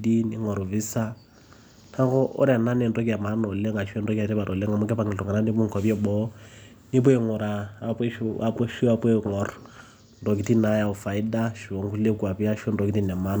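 No technical faults are audible.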